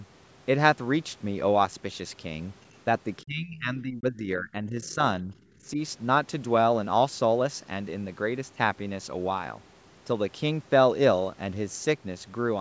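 At 3.19 to 3.23 s a faint scrap of the other side's voice leaks through, about 40 dB below the speech. The echo canceller likely left some loudspeaker sound in the microphone signal. It shows as a thin, separate trace on the spectrogram. From 3.22 to 4.99 s the speech is suppressed in double talk. For around one and a half seconds the level drops, by up to about 20 dB at its deepest, as the canceller likely treated the talker as echo. The waveform envelope sags. Inside that stretch, at 4.84 to 4.95 s, the other side leaks through again, louder this time at about 30 dB below the speech. Shorter double-talk dips follow at 5.22 to 5.34 s, of about 10 dB, and at 5.73 to 5.78 s, of about 5 dB. Each is a brief notch in the envelope.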